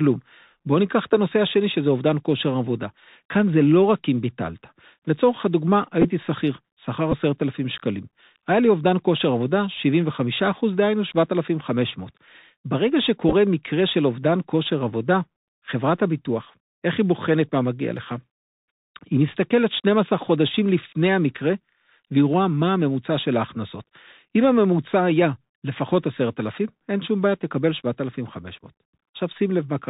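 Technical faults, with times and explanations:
Throughout, Bluetooth CVSD headset codec: the one-bit delta coding cuts everything above 4 kHz, leaves granular hiss, and scratchy sibilants where loud highs outrun the adapting step.
6.02–6.06, 7.12–7.14, 13.29–13.34 and 24.44 s, Bluetooth headset packet repeated: lost packets were replaced by re-decoding the previous one, giving brief buzzy roughness, just a tick at 24.44 s.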